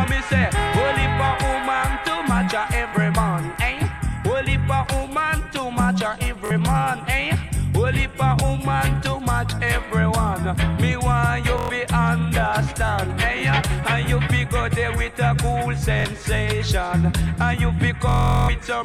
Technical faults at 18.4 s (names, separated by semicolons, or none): Bluetooth stutter